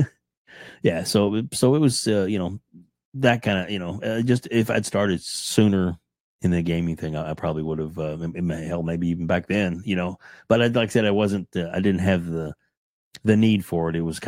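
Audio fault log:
No faults heard anywhere in this speech recording.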